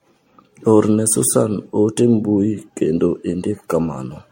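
Throughout the speech, generation loss gives a swirly, hollow, smeared sound with blurred attacks, likely from around seven MP3 re-encodes; spectrograms show speckled holes and nothing above 16.5 kHz.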